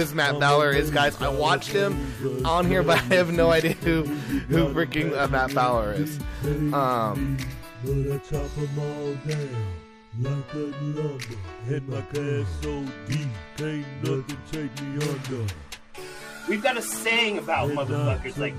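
No technical faults can be heard anywhere in the recording, with the signal holding steady and intact throughout.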